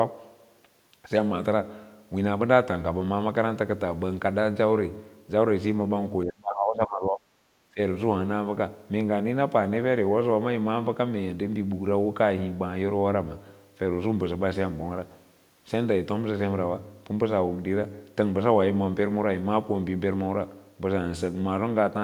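From 6.24 to 7.32 s the speech drops sharply, by roughly 30 dB at its deepest; a shorter, shallower dip of around 15 dB follows from 7.74 to 7.79 s. This is likely speech suppressed in double talk: with both ends talking at once, the echo canceller could not tell the near talker from loudspeaker echo and attenuated everything it picked up.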